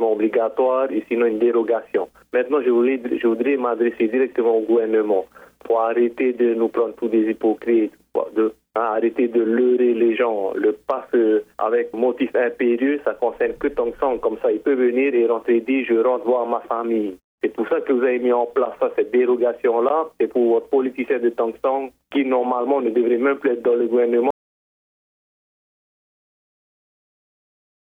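At 24.31 s an audio dropout to silence abruptly ends the sound, likely from lost input; unlike a pause, no room tone remains.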